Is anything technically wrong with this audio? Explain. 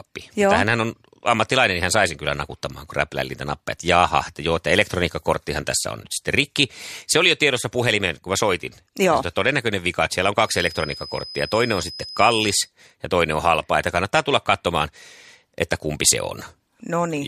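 Yes. From 10.39 to 12.71 s, a speaker-to-microphone loop likely hovering at the edge of feedback leaves a feedback whistle: a thin 5 kHz tone about 15 dB below the speech.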